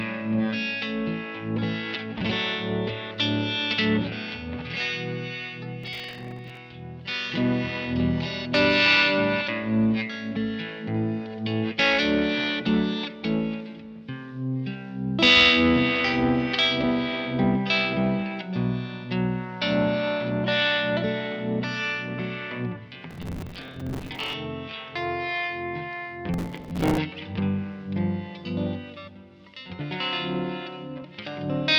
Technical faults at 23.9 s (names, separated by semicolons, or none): processor overload crackle